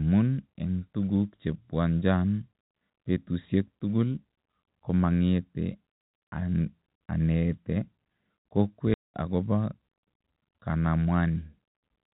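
At 8.94 s a run of packets never arrived and the receiver substituted plain silence, a packet loss filled with silence lasting 200 ms until 9.14 s, which fits ten 20 ms packets. The speech drops out abruptly, with hard edges.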